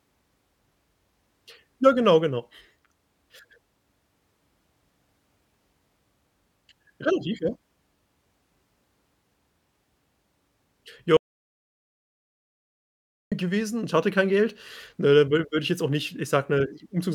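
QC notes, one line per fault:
11.17–13.32 s, audio dropout to silence: the speech cuts to silence for about 2.15 s, no room tone, resuming at "gewesen und hatte kein"; likely a lost input link or mute.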